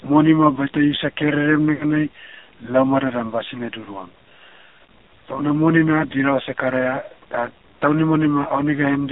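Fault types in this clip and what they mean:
AMR narrowband mobile codec: Throughout, the sound is confined to roughly 250 Hz to 3.7 kHz and heavily buzzy and synthetic, which fits a low 5.9 kbps AMR-NB vocal-tract model.
Lost AMR speech frames: From 1.76 to 1.84 s, a 40 ms dip where the decoder repeats the last pitch and tract settings at falling gain, fitting two dropped frames.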